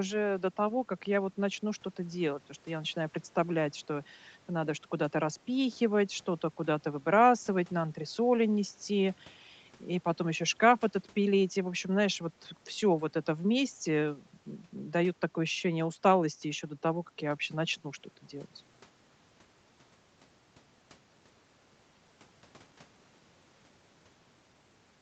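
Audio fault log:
No faults are audible in this speech clip. The sound carries nothing above about 8 kHz, which fits the normal band limit of an Opus call path and the call's microphone processing.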